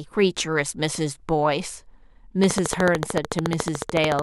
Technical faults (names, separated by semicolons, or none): train of clicks